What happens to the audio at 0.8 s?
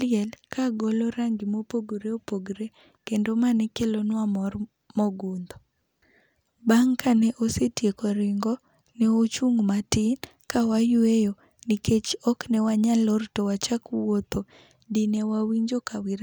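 At 0.84 s, just before "rangi ma", a single sharp click cuts through the speech, showing as a thin vertical line across the spectrum. The likely cause is dropped samples: roughly a tenth of a millisecond of the stream goes missing, so the waveform jumps abruptly from one value to a later one. That gap is far too brief to remove any audible sound, so only the discontinuity itself is heard, as the click.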